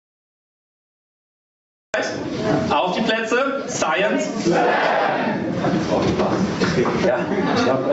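From start to finish the level breathes, with a gain swing of around 20 dB. That is gain pumping, most likely from input gain set far too high with a fast limiter clamping down on every peak. On the waveform the envelope looks flattened, with loud and quiet parts squeezed together, and the spectrogram shows a band that stops at 8 kHz, consistent with Opus at about 48 kbps.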